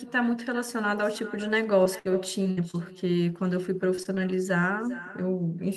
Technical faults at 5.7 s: echo with no canceller

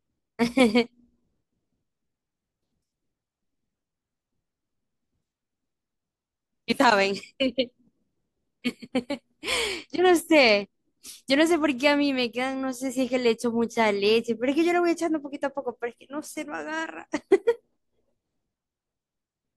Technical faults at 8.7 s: none

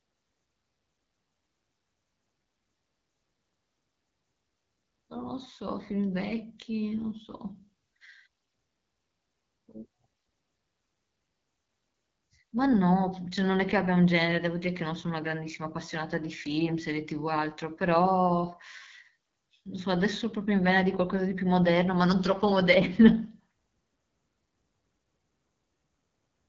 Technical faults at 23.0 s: AMR wideband (HD Voice) codec; de-emphasis applied wrongly

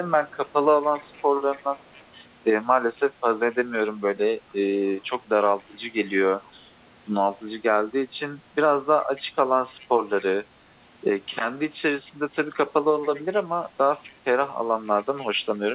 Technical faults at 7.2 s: none

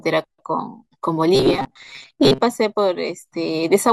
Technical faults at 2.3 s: robotic sound from repeated short buffers

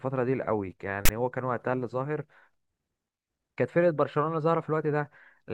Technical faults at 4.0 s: none

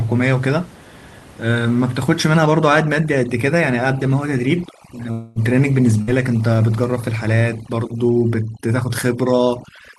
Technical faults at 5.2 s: overdone noise removal; long network dropout

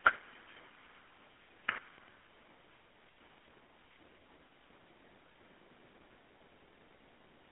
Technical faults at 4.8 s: GSM full-rate codec

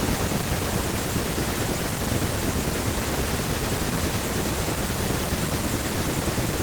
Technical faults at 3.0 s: block size mismatch (padded)

